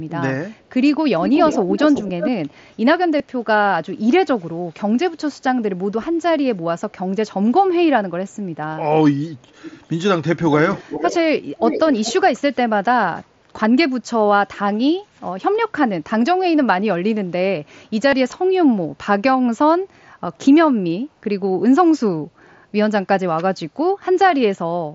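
From 1.22 to 2.31 s, a delayed copy of the speech trails the original by about 352 ms. It is nearly as loud as the direct sound. This is an echo leak, likely from a far-end loudspeaker whose echo canceller let some of its microphone pickup back into the call. At 3.18 s, a brief concealed Bluetooth headset packet loss occurs. About 15 ms of audio went missing between headset and phone. The receiver filled the gap by repeating recent waveform. The echo leak returns at 9.49 to 9.86 s, 10.38 to 11.19 s, 11.57 to 11.80 s and 12.04 to 12.14 s. The delay is now about 404 ms. The level rises and falls, from faint to nearly full strength. From 18.10 to 18.13 s, a second concealed packet loss covers about 22.5 ms, which fits three lost frames. It is short, but it sounds like a held buzzy tone, with a small warble where the speech returns. Around it, the mSBC headset codec carries the speech up to 8 kHz with light grain.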